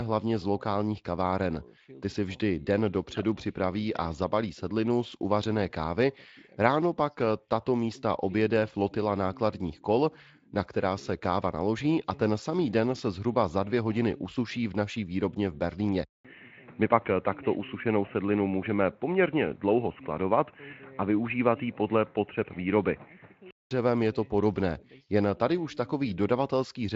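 From 16.05 to 23.71 s, after a 200 ms silence, the speech turns dull and boxy, likely from an input switched to a poorer device. A spectrogram shows nothing above 3 kHz instead of the 7.6 kHz Speex band, plus a faint new noise floor. The waveform shows a flat gap at the switch.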